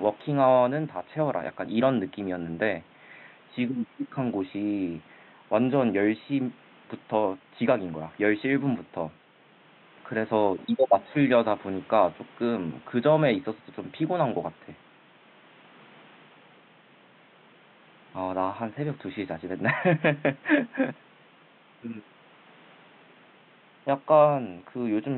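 Nothing in the speech stood out as a technical fault on listening, and the faint room background sits about 30 dB below the voice as part of the original recording.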